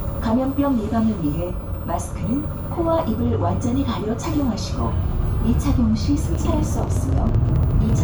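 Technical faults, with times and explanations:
6.35–8.00 s: train of clicks. Around twenty short, similar pulses arrive at about 11.6 per second but with uneven spacing, heard as an irregular ticking laid over the sound and reaching roughly the level of the sound itself. The likely cause is electrical interference from nearby equipment or a faulty connection or power supply. On a waveform they show as thin, repeated spikes. On a spectrogram they show as narrow vertical lines spanning the frequency range.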